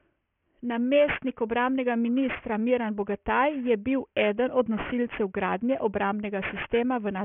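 This speech clip... no, can't start that way. Aliasing runs through the whole clip: the audio was taken down to a 6 kHz rate with no anti-alias filter first, so everything above the 3 kHz fold point mirrors back as unrelated tones, sitting roughly 15 dB below the speech and making sibilants gritty and metallic.

Let me rewrite properly:

Throughout this speech recording the sample rate was dropped to 6 kHz without removing content above half that rate, producing aliasing: energy above 3 kHz folds back into the band as unrelated tones, roughly 15 dB below the speech, leaving sibilants gritty and metallic and the spectrum crowded up to the band edge.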